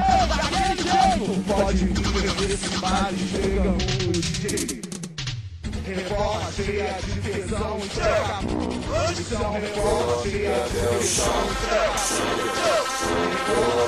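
Across the whole clip, a channel delay (doubling) is audible: every sound is followed by a second copy about 85 ms later, at the same level, heard as a slap echo. One channel of the original pair was held back by a long buffer before the two were summed to mono, so the late copy never blends with the first. The offset fits a 4096-sample buffer at a 48 kHz rate.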